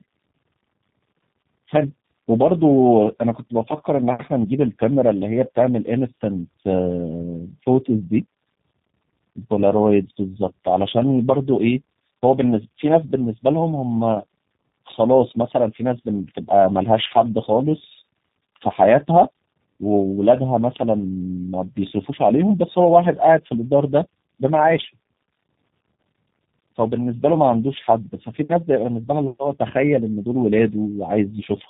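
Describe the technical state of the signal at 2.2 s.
At 2.2 s, as throughout the clip, the speech shows tandem speech coding: it has passed through two low-rate speech coders in a row, the second re-encoding the first's already degraded output. The result sounds rough, muffled and warbly, with nothing above 3.8 kHz.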